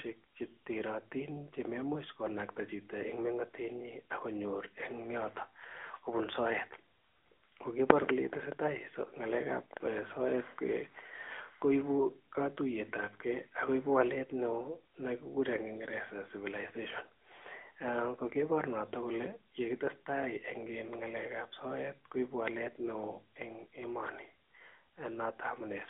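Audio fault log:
Throughout, AMR narrowband mobile codec: the speech sounds thin, boxed-in and plainly processed, with a buzzy, slightly synthetic edge on voiced sounds and no air or sparkle on sibilants. Nothing reaches above about 3.7 kHz, and the low end fades below roughly 250 Hz, giving the classic phone-line band. The speech is rebuilt from a vocal-tract model excited by sparse pulses, here at a rate that sounds like around 10 kbps, which leaves audible coding damage.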